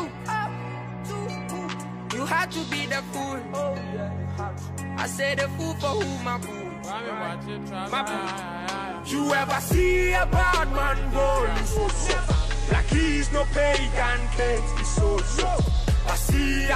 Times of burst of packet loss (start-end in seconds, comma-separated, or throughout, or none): none